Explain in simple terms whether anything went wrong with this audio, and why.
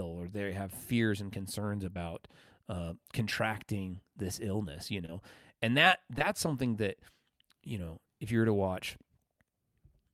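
Short concealed packet loss occurs at 1.93, 5.06 and 6.19 seconds. Tiny chunks of the call arrived too late. The receiver papered over each gap, leaving brief smears.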